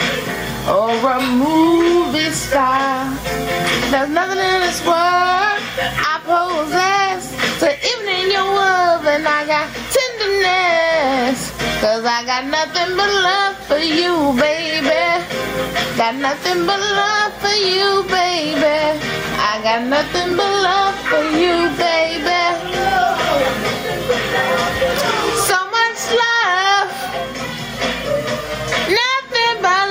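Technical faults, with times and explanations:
Throughout: gain pumping. The level breathes with the material and the gain swings by around 15 dB. Loud and quiet passages sit unnaturally close together, and the whole sound is flattened and squashed. The likely cause is an input gain set far too high for the microphone, with a fast limiter or compressor clamping down on each peak and releasing between them.
20.32 s: block of digital silence. A tick or dip interrupts the sound where it drops for about 2.2 ms to silence and returns with no fade. The gap is too short to hear as a pause. Such a brief run of zeroed samples points to the output buffer not being filled in time, or to a calculation yielding invalid values that were replaced with silence.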